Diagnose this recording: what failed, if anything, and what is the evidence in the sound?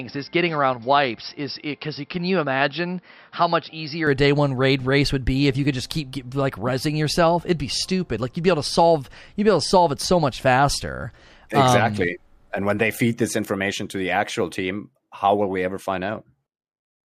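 The input stage failed at the start: from 0.0 to 4.07 s the speech has nothing above 5.5 kHz, sits about 5 dB lower and carries its own noise floor roughly 50 dB below the signal. At 4.07 s the full band returns abruptly, with no silence at the switch. This is likely the input switched to a poorer device, then back. A codec bandwidth drop would narrow the band without changing the noise character or the level together.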